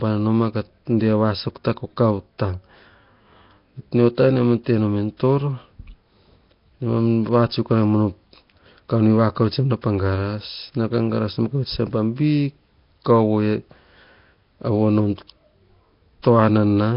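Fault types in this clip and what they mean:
Nellymoser compression: Throughout the speech there is a coarse, hissy fringe and a blurred, watery smearing that point to heavy damage from a low-rate block codec, likely Nellymoser Asao at something near 22 kbps. Such a coder spends too few bits to describe every band, so quieter parts of the spectrum are replaced with synthetic noise, and nothing survives above about 5.3 kHz, leaving the speech dull on top and grainy within.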